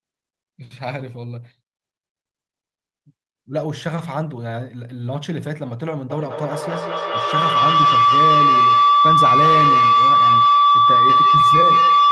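From 6.1 s to the end of the clip, a feedback howl takes over the speech. Sound from a loudspeaker is picked up again by a microphone on the same call, and each pass through the loop comes back louder. It narrows to a ring near 1 kHz that pulses roughly every fifth of a second and peaks about 9 dB above the speech. An ordinary echo fades with each repeat and a steady hum stays level, but this one keeps growing. The call's coding, with its high end stopping near 12 kHz, carries the howl through.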